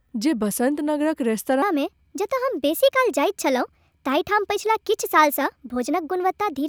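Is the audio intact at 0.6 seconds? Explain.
Yes, at 0.6 seconds the speech plays through intact, with no dropout, click, distortion or other fault at that moment.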